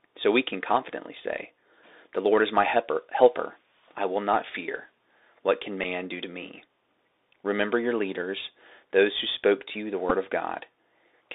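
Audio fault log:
Throughout: Bluetooth CVSD headset codec. The speech is squeezed into a narrow phone band of about 300 Hz to 3.7 kHz, with a granular hiss underneath, scratchy s sounds and clear distortion on loud bright moments where the one-bit delta steps can't keep up.
5.84 s and 10.10–10.12 s: Bluetooth headset packet repeated. Each is a brief buzzy tick where the headset lost about 7.5 ms of audio, which fits two dropped packets, and replayed the previous packet's bits instead. The repeats at a 3.75 ms spacing give that short rough texture.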